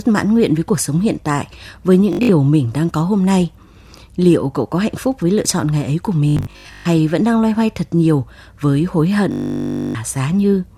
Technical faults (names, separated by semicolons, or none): Bluetooth stutter